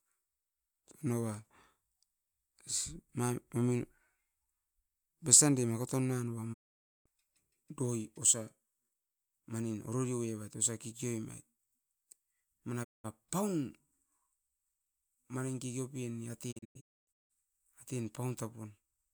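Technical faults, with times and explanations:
6.52–7.08 s, 12.83–13.06 s, 16.51–17.32 s: digital broadcast dropout. The receiver mutes behind a 20 ms fade for 0.51 s, then 0.19 s, then after "manin kekeopen" in scattered holes over 0.77 s (longest 0.26 s). The gap lengths fit whole 32 ms frames. Nothing repeats or smears, and the sound resumes further on with the missing audio gone.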